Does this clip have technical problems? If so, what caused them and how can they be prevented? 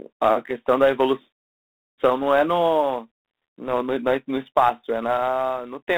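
Yes. Throughout the speech there is G.726 ADPCM damage. A rasping hiss tracks the speech level, and the band runs from about 250 Hz to 3.7 kHz, with nothing above 3.9 kHz. The coarse step quantisation points to the 24 kbit/s mode. Unlike plain band-limiting, the grit rides on every syllable. It can be prevented by using 32 kbit/s or a wideband codec.

Sample clock jitter is also present throughout. The converter's clock wanders by a few microseconds, which leaves an error roughly 35 dB below the signal. It shows as a fine roughness on loud, bright moments and vanishes in pauses. It grows with the waveform's slope. A stable, low-jitter clock source prevents it.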